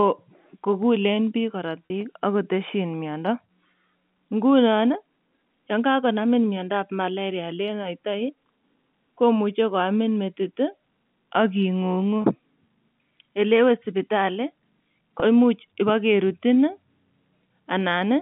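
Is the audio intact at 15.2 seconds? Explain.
No. From 15.2 to 15.22 s there is packet loss with pitch repetition. About 20 ms of audio is missing, which points to a single lost packet. The receiver filled the gap by repeating the last pitch period, so the sound briefly holds with a slight buzz.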